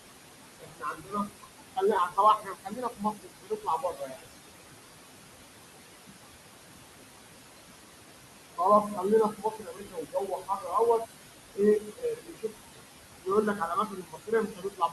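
Throughout the clip the background pumps, sinking by about 20 dB in the pauses and swelling back under the speech. These are noise suppressor artifacts: the suppressor decides band by band, frame by frame, what is steady noise and turns it down. Here it is working against fairly strong room noise, only about 8 dB below the speech.

From 0.59 to 4.26 s, 8.57 to 11.08 s, 11.54 to 12.8 s and 13.19 s to the end, soft consonants and word endings sound swallowed or faint, pulled down by up to about 20 to 22 dB. This is speech cut by the noise suppressor, which mistook these quiet parts of the speech for background and attenuated them with it. The cuts add up to roughly three seconds in the first stretch and about 1.5, 0.7 and 1 second in the later ones.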